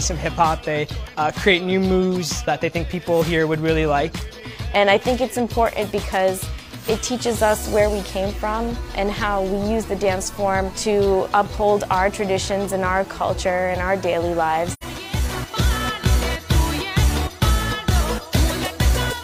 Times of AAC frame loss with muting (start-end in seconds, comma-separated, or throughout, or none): 14.71-14.83